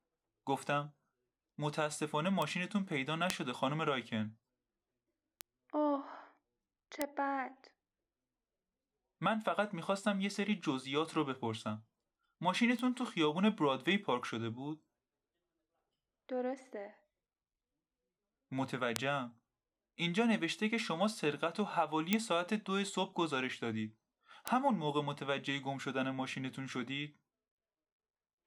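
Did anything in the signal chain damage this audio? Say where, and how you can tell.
Yes: bit error spikes in digital storage or transfer. Isolated broadband ticks at 2.42, 3.30, 5.41, 7.02, 12.79, 18.96, 22.13 and 24.48 s, peaking around -11 to -23 dBFS, unrelated to the speech. Each is one to three samples jumping by a flipped bit's power-of-two value, then returning.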